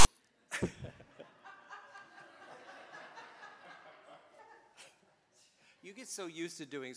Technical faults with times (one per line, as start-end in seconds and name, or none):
0.00-0.05 file tags played as audio